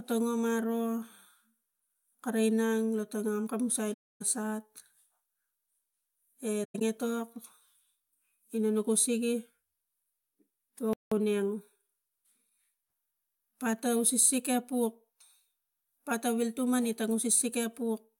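A speech recording with AAC frame loss with muting in two places. At 3.93 to 4.22 s the sound fades into a soft-edged hole of about 277 ms, which fits around thirteen lost frames zeroed by the decoder. At 6.64 to 6.82 s, 128 ms of gaps are scattered over 171 ms, the longest lasting around a tenth of a second. The overlapping windows smooth the edges. At 10.93 s the audio stops mid-flow for 182 ms and resumes at 11.12 s. This is a playback stall, likely from the player running out of data or being blocked. Time-compressed catch-up follows from 11.12 to 12.94 s. The speech runs at 1.1 times speed with unchanged pitch as small pieces are cut out and cross-faded. This gives it a hurried feel.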